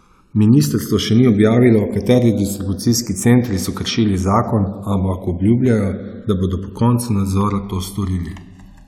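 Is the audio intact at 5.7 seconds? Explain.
No. A block of digital silence falls at 5.66 s, lasting about 1.45 ms. For that instant the sound drops out, which fits one 64-sample buffer the playback program failed to fill in time. The waveform drops straight to silence and jumps back with no fade on either side, so the gap is heard as a brief tick or dip rather than an audible hole in the speech.

At the same moment, and across the whole clip, the channels are drifting apart. Left and right come from devices on separate clocks that disagree by around 200 parts per million, so the offset between them keeps growing, reaching roughly 1 ms by the end. When the channels are summed to mono, the resulting comb-filter notches glide slowly through the spectrum, giving the audio a gradual flanging sweep.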